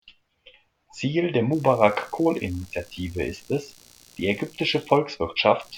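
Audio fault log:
1.52–5.78 s, computer activity noise: a faint buzzing, chirping layer runs from 1.52 s to the end. It pulses around 70 times a second at roughly 30 dB below the speech. It follows the computer's load swings, not the speech, because processor or peripheral activity shifts the audio circuit's shared ground.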